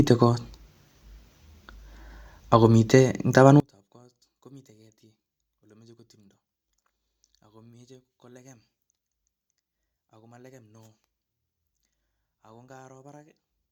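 One channel inverted, from 3.6 s to the end of the clip: the speech abruptly drops by about 33 dB in the mono mix, leaving a faint residue where the centred voice should be. The likely cause is reversed polarity on one stereo channel, so the content shared by left and right cancels when the two are summed. With nearly identical channels, only their small differences survive, which is why the voice almost disappears.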